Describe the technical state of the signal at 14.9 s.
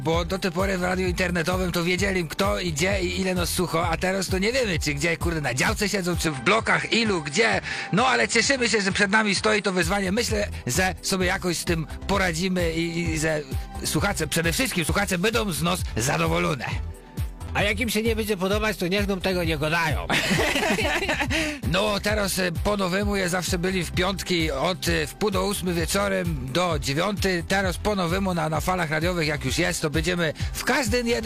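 At 14.89 s there is a dropped buffer (overrun): an abrupt jump forward in the sound, skipping roughly 20 ms with no gap of silence. The likely cause is that the software failed to read its samples before the hardware overwrote them, so the surviving audio on either side is spliced directly. On a waveform this shows as a sudden discontinuity in level and phase; a spectrogram shows a thin vertical broadband line at that instant.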